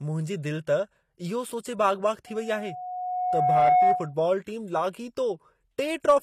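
From start to end, the speech carries plainly audible codec damage. Nothing is present above 14.9 kHz. The likely cause is HE-AAC compression, at a rate that fits roughly 24 kbps. This codec keeps only the lower spectrum in full. It fakes the treble by copying lower bands upward under a coarse envelope. The rebuilt top end does not match the real harmonics. Sibilants can turn gritty or metallic as a result.

At 2.26 s a loudspeaker feedback squeal begins. It is a single tone at 729 Hz. It takes about a second and a half to build up. At its height it sits around 10 dB above the speech. It stops at 4.14 s. A microphone was picking up the loudspeaker it fed. At 729 Hz the loop gain passed one, so that frequency fed on itself and grew.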